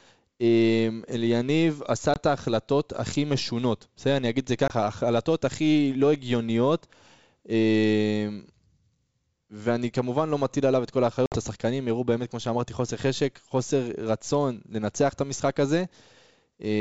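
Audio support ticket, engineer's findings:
Packet loss on the ADPCM call: decoder predictor and step size desynchronised after each gap. Dropouts at 2.14 s and 4.68 s (20 ms, about one packet each) and 11.26 s (60 ms, roughly three packets). Speech resumes slightly distorted, settling within some tens of milliseconds. G.722 wideband at 64 kbit/s stays clear to 7 kHz.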